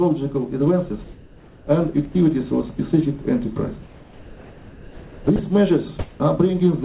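A voice detector at the sending end likely judged brief stretches of sound to be background and stopped transmitting. At 2.12–2.15 s and 5.36–5.39 s this is sound dropped by the voice detector: about 30 ms of audio each time gives way to steady synthetic noise before the signal resumes. From 5.99 to 6.2 s, discontinuous transmission likely accounts for comfort noise in place of the background. The real background, about 23 dB below the loud parts, is swapped for featureless noise with a level shift of about 7 dB. Throughout, nothing is heard above 4 kHz, consistent with a narrowband call codec such as G.711.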